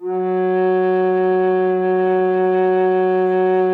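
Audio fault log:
1.01–3.74 s, call bitrate drop: the call's bandwidth estimate collapsed and the encoder was ordered to spend far fewer bits on the music, a fall consistent with going from 128 kbps to roughly 28 kbps, with the starved stage lasting about 1.5 s. Coarser coding leaves the sound rough and watery, and at so low a rate the high frequencies are trimmed away, so the music turns muffled and stays degraded through the clip's end.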